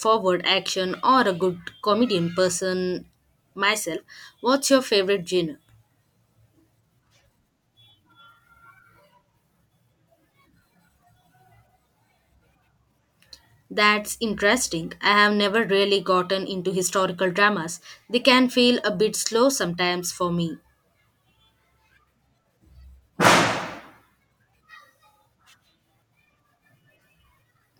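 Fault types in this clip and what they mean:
No faults detected in this recording.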